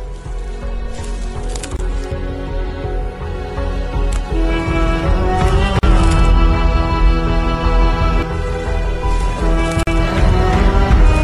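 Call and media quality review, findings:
Gap at a join of encoded pieces, three times. Dropouts at 1.77–1.79 s (about 25 ms), 5.79–5.83 s and 9.83–9.87 s (40 ms each). Spaced roughly 4 s apart. Edges smeared by the codec. Sound resumes where it stopped. Probable component: segment encoder and concatenation step. Each segment carries encoder start delay and last-frame padding. Both left untrimmed at the joins.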